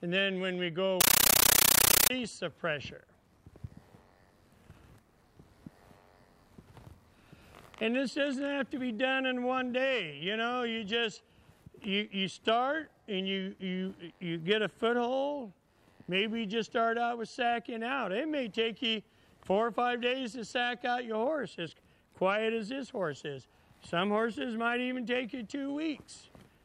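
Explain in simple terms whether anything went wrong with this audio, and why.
From 1.01 to 2.10 s, a compressed stream played as audio: undecoded Dolby Digital data is heard as harsh static, chattering 31 times a second.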